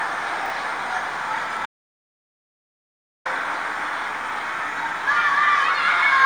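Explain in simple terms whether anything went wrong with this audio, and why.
A few things went wrong here, in three spots.

At 0.46 s and again at 4.30 s you get a quick jumbled blip. That's chunks out of order. The audio is handled in tiny 20 ms pieces, and one of them arrived late and got played after the pieces meant to follow it. At 0.46 s it's a single piece one step late. At 4.30 s a piece is two steps late. Nothing is missing, but the shuffle makes hard joins.

From 1.66 s to 3.25 s the sound simply cuts out, for about 1.6 s of dead silence with no background hiss at all. That's an audio dropout to silence. The input likely got lost for a moment, through a loose connection or a brief mute, while the recorder kept writing blank audio. Whatever happened in that stretch is gone for good.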